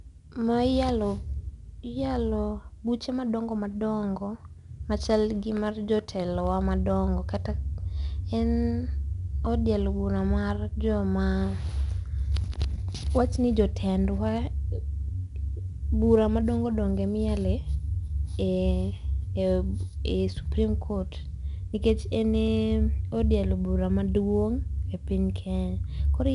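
From start to finish, the speech has been through 4-bit ADPCM compression. Each sample is stored only as a coarse 4-bit step away from a predicted value, and the step size adapts as the signal moves. The leftover error is a broadband grit that rises and falls with the speech, so louder passages carry a rough hiss, plainly audible throughout. Nothing reaches above about 11 kHz, which fits a sample rate near 22 kHz and an 88 kbps stream, and which takes the sparkle off the top end.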